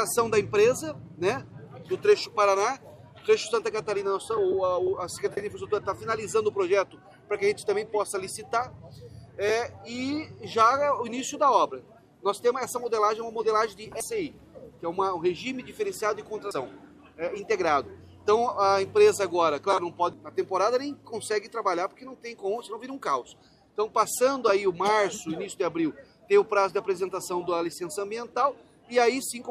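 Compressed frames skipped occur at 14.00 s, 16.51 s and 20.13 s. At each point whole blocks of the encoded audio never reach the output, so the sound lurches forward: roughly half a second at 14.00 s, about a fifth of a second at 16.51 s and around a third at 20.13 s. Each gap is a multiple of a 92.9 ms frame.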